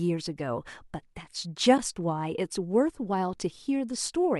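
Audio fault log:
1.78 s AAC frame loss with muting: The speech drops out for an instant and then returns. The hole is tiny and soft-edged. The decoder had no data for that stretch, so it set the spectrum to zero. The overlapping transform windows then faded the sound down and back up. The gap fits one missing frame of about 10 ms. That matches the short frames of the low-delay AAC coding heard here, likely AAC-ELD.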